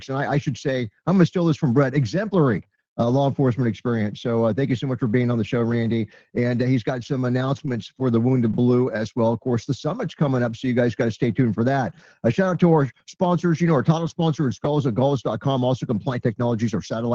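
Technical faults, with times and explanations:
11.71–11.73 s, 11.89–11.91 s, 11.99–12.01 s and 12.44–12.46 s: lost packet rebuilt from error correction. Four separate 20 ms packets went missing, and each was replaced by the low-bitrate backup copy carried in the following packet. That is why there is no dropout, only brief patches that sound rougher and grainier than their surroundings. On a spectrogram, each shows as a thin 20 ms vertical stripe with smeared harmonic detail and a lifted noise floor. The waveform stays continuous with no flat gap. The surrounding audio sits within the 8 kHz band of an Opus call stream, which fits a rate of about 24 kbps.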